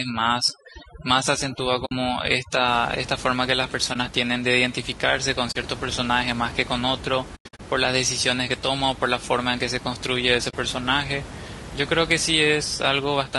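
Throughout, the speech likely went through low-delay AAC compression (AAC-ELD) at a low bitrate, consistent with about 32 kb/s. Its short frames resolve the pitch harmonics poorly, so the voice is plainly rough and grainy, with noise between the harmonics.

From 0.0 to 2.68 s, overdone noise removal switches off bands that sit near its noise estimate. The room noise, about 14 dB below the speech, drops and breaks up into twinkling specks.

AAC frame loss with muting also occurs. The decoder zeroes missing frames, and the overlapping windows fade the sound out and back in, leaving brief dips or soft-edged holes. These occur at 1.85 to 1.92 s (60 ms), 3.93 to 3.96 s (20 ms), 5.51 to 5.56 s (40 ms), and 10.49 to 10.54 s (40 ms). At 7.35 to 7.60 s, 200 ms of sound is lost across 240 ms in several gaps, the longest around a tenth of a second.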